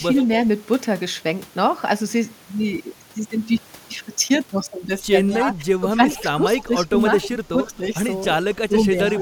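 This speech clip has echo leak at 0.16–0.26 s, 5.30–5.39 s, 5.91–6.22 s, 6.59–6.64 s, 7.24–7.28 s and from 9.09 s to the end of the clip. Each is a delayed copy of the speech arriving about 270 ms after the original, at levels from about 25 dB below the speech to about 5 dB below it in the final burst. The cause is likely a far end playing the call over a loudspeaker, where the echo canceller failed to remove everything its microphone picked up and sent the residue back. The near-constant 270 ms spacing reflects the round trip of the call.

Speech suppressed in double talk occurs between 5.42 and 7.83 s, where the speech drops in level by up to about 15 dB in pieces totalling roughly a second, and again at 8.54–8.95 s for roughly 0.3 s. Both stretches coincide with overlapping talk, which likely left the echo canceller unable to separate the local talker from loudspeaker echo, so it attenuated both. 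The first stretch also contains echo bursts, so the level dips and leaked echo are heard together there.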